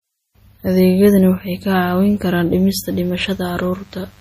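A speech recording with plainly audible codec damage throughout: a watery, swirling texture on sibilants and a treble band that stops dead at 15.2 kHz, pointing to MP3 compression at a low bitrate, around 40 kbps. Unlike a simple low-pass filter, the highs here flicker in and out between frames rather than just dulling. From 2.76 s to the end at 4.21 s a faint mains buzz at 50 Hz sits well below the speech; its harmonic-rich rasp, rather than a smooth tone, separates it from plain hum.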